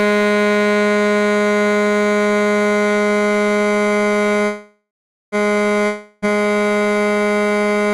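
At 4.45 s the music stops moving forward. The last sound is stretched into a buzzy, hissing tail that fades out. About 0.47 s of silence follows. At 5.35 s the music picks up exactly where it left off, so nothing is lost, but everything after runs about 0.87 s late. This is a call audio freeze. Packets were likely held up in transit, and the jitter buffer ran dry for roughly 0.87 s.

A second break runs from 5.86 s to 6.28 s. Again the last sound is carried on as a fading buzz, this time for about 0.36 s, without dropping to full silence. When the music returns, it jumps ahead. The 0.36 s that should have played is simply gone. This is a long network dropout. The audio for that stretch likely never arrived, so the receiver could only fill the gap and then skip past it.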